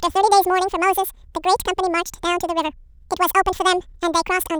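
From start to finish the speech plays as audio read two samples at a time: each sample pair is taken as one frame, doubling speed and raising pitch a full octave.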